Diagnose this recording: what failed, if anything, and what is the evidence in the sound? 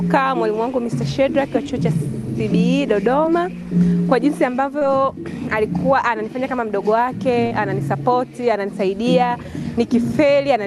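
The failure is in the network stage: short concealed packet loss at 3.25–3.29 s, 4.79–4.83 s and 7.47–7.53 s, each heard as a brief smear or wobble. About 20 ms, 20 ms and 40 ms of audio never arrived in time, and the decoder extrapolated the preceding sound to fill each gap before crossfading back. On a spectrogram, each gap shows harmonics held flat or a diffuse noise patch where fine detail should change.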